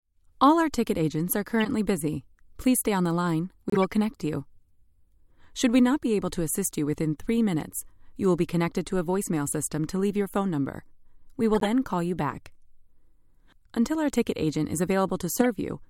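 Four short glitches land at 1.60 to 1.66 s, 3.70 to 3.84 s, 11.55 to 11.63 s and 15.39 to 15.46 s, each a corrupt frame decoded. Some bits in the compressed stream got flipped and the decoder played those frames anyway, so misread gains and codes throw energy into the wrong frequencies. You hear a quick chirpy burst of noise peaking around -15 dBFS. The one at 11.55 s is a bit softer, nearer -20 dBFS, and the 3.70 s one drags on longest.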